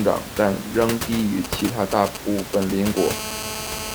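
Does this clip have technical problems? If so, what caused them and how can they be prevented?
Yes. From 1.44 to 2.88 s the speech is crossed by GSM signalling bursts: a galloping dit-dit-dit of brief 217 Hz buzzes, roughly 10 dB below the speech. A nearby 2G phone was exchanging short control transmissions with the network, and the audio circuitry rectified each radio burst into sound. Unlike a steady call buzz, it arrives in separated clusters with gaps between them. Keep phones at least a metre from microphones and cables.

From 2.97 s to the end at 3.95 s the pattern becomes a continuous GSM phone buzz: a hard, raspy 217 Hz tone rich in harmonics, about 9 dB below the speech and unrelated to it, sitting just above the room noise, which stays about 10 dB under the speech. Here the phone is in a call and transmitting 217 times a second without pause, so the rectified pulses fuse into one unbroken buzz instead of the earlier stuttering groups. 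Switch phones off or to flight mode near the recording chain.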